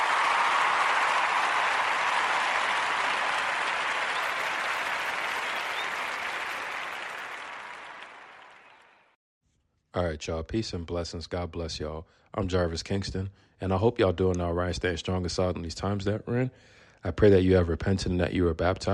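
From 4.21 to 7.35 s the resampler restarts on every block, converting each 10 ms block alone, which points to a 24 kHz to 48 kHz upsample. Each seam carries a small error, giving a 100 Hz buzz under the signal, with vertical spectrogram striations and waveform steps every 10 ms.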